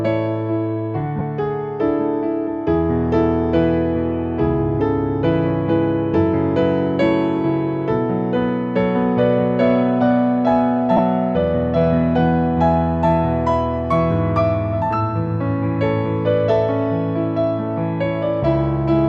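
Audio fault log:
1.19 s and 10.97–10.99 s, lost LE Audio frames: two brief gaps of about 15 ms, consistent with two consecutive 7.5 ms frames. The decoder refills each gap with the previous spectrum and random phase signs, so tonal content blurs into a short noisy smear. Unlike a hard dropout, neither gap drops to silence.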